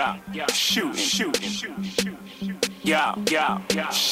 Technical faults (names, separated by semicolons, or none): low bit depth with dither